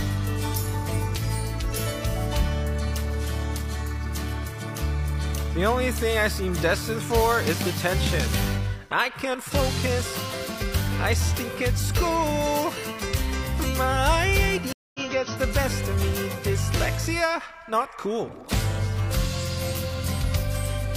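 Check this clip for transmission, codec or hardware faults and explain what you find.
One transmission fault is present: a stream reconnect between 14.73 and 15.00 s. The connection to the stream dropped, so the player stalled, re-established the link and started a fresh decoder partway through the stream instead of continuing where it left off. You hear a gap of silence of about 0.22 s, and when the sound comes back it has skipped ahead by roughly a fifth of a second, so a short stretch of audio is simply missing.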